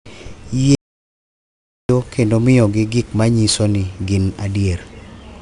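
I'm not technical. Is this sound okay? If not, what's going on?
No. From 0.75 to 1.89 seconds there is an audio dropout to silence: the speech cuts off and, after just over a second of complete silence with no background sound at all, comes back mid-flow. Whatever was said in that gap is gone for good. The likely cause is that the input was briefly lost, through a loose connection, a failed link or an accidental mute, while the recorder kept writing silence.

Throughout the whole clip there is also 4-bit ADPCM compression, a space-saving format that stores each moment of sound as a rough step from a guess about where the sound is heading. Those rough steps leave a gritty hiss that rides on every loud part of the speech and a harsher crunch on sudden sounds. The damage is plainly audible here, and nothing above about 10.6 kHz survives, so the speech also sounds somewhat dull.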